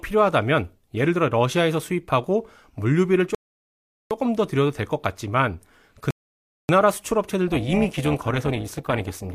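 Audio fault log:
3.35–4.11 s and 6.11–6.69 s, rebuffering stall: the speech drops abruptly into dead silence, then picks up exactly where it left off, with nothing skipped and nothing repeated. The first gap adds 0.76 s and the second 0.59 s. The player ran short of downloaded audio and simply halted playback until more data arrived, so the pauses stretch the timeline rather than removing anything.
7.48–9.34 s, overlap-add ripple: the final stretch of speech takes on a metallic buzz with extra tones around the voice, with the level swinging by about 11 dB at a rate of around 400 Hz. The audio was split into windowed frames and rejoined with overlaps whose gains fail to add up evenly, so loudness rises and dips once per frame, and that frame-rate modulation is what gives the harsh, mechanical texture.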